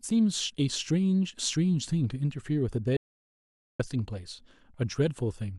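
Speech, with an audio dropout to silence from 2.97 to 3.80 s: about 0.83 s of silence with no room tone, unlike a natural pause, likely from a lost input.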